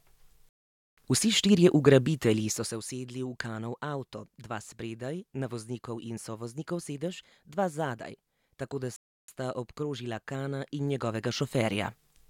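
At 0.49 s the speech drops to silence for about 0.48 s, then picks up exactly where it stopped. This is a rebuffering stall: the player ran dry and waited for data. From 2.35 to 2.81 s a fine ticking zipper noise rides on the speech as the level falls by roughly 15 dB, in 1 dB steps about 50 times a second with no smoothing. At 8.96 s a second stall adds another 0.32 s of silence.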